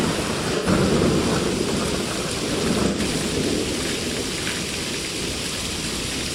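AAC frame loss with concealment occurs at 0.56 to 0.67 s and again at 2.87 to 2.98 s. Each gap of about 85 ms, which fits two lost frames, is filled from the last good spectrum, so the audio briefly turns smeared and noisy before recovering.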